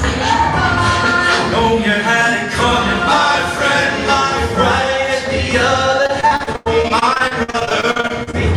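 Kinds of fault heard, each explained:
Repeated packet loss (robotic sound): from 6.03 to 8.35 s, 26 brief dropouts, the longest 97 ms, each patched by extending the sound just before it. About a third of that stretch is concealed audio, giving a choppy, robotic texture with pieces missing.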